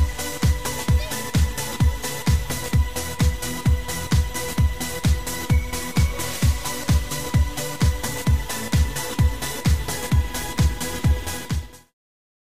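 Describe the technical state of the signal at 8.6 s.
At 8.6 s the signal is intact, with no fault audible at that moment.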